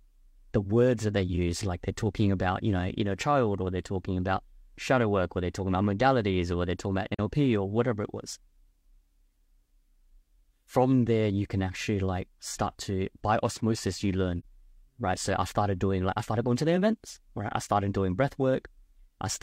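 Around 7.14 s and again at 14.39 s the speech briefly drops into silence, a short gap of roughly 43 ms each time, which fits a single lost AAC frame. This is AAC frame loss with muting: the decoder zeroed that frame's spectrum, and the overlapping transform windows fade the sound down into the hole and back up out of it. That gives soft edges rather than a hard cut.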